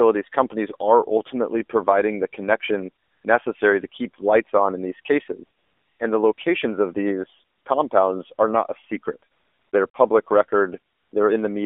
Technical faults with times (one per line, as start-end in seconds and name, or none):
0.00-11.66 AMR narrowband mobile codec
3.04-3.24 AMR comfort noise
5.58-6.00 AMR comfort noise
6.34-6.38 AMR comfort noise
7.56-7.66 AMR comfort noise
9.32-9.94 AMR comfort noise
10.94-11.12 AMR comfort noise